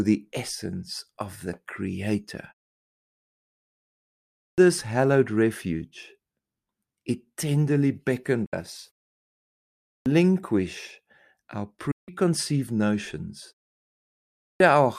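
A speech recording with two separate problems. The first is a clipped start after a pause, which happens three times. Speech resumes at 3.94 s after about 1.5 s of silence, at 9.43 s after 0.6 s, and at 14.04 s after 0.6 s. Each time roughly 0.56 to 0.64 s of the opening is swallowed while the output device wakes from sleep and relocks, so the talker seems to begin mid-word. On a waveform the envelope jumps from flat to full level with no onset ramp. On a spectrogram the formant bands start with a hard vertical edge. The second problem is a digital broadcast dropout, heard at 8.455 to 8.535 s and at 11.911 to 12.087 s. The receiver muted after losing the signal or rejecting corrupt frames. The 64 ms and 160 ms gaps fit two and five lost frames of 32 ms each. Each hole fades in and out over about 8 ms. On a spectrogram it is a clean full-band blank column, and the waveform collapses to silence, so that stretch of the programme is simply gone.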